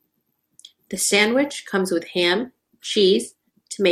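A short piece of speech, and nothing technically wrong turns up anywhere in it.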